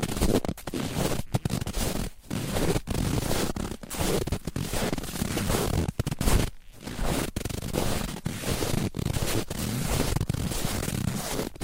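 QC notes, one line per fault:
No faults found.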